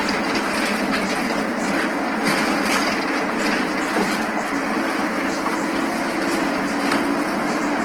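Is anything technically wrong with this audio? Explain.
Yes. Throughout, a bit-starved encoder in music mode, likely Opus compression near 16 kbps, fills bands with folded or noisy content, leaving these sounds plainly grainy and rough.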